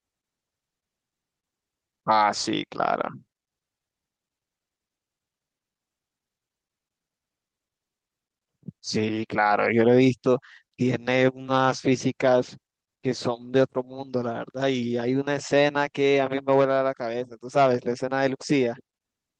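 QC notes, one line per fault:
11.02–17.11 s, call bitrate drop: the call's bandwidth estimate fell and the Opus encoder was pushed to far fewer bits. The sound coarsens into a rougher, watery texture, and its top end is cut from 12 kHz down to 8 kHz, so it dulls for almost 5 s before recovering. The coarseness fits a rate falling from about 32 to 18 kbps. On a spectrogram, energy above 8 kHz vanishes, leaving a flat ceiling, with smeared, blotchy detail below it.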